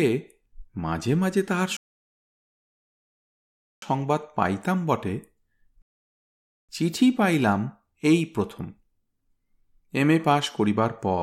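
At 1.77 s the speech halts into silence until 3.82 s, then at 5.82 s again until 6.69 s: rebuffering stalls, where playback starved for data and waited. Unlike a dropout, nothing is skipped; speech resumes exactly where it stopped, adding about 2.06 s and 0.87 s.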